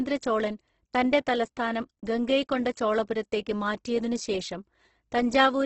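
Throughout the speech, the sound is grainy and rough, with nothing above 8.2 kHz. This is likely Opus compression in its CELT mode, starved of bits at a rate near 12 kbps. Underfed bands are filled with folded or noise content, so tones turn gritty.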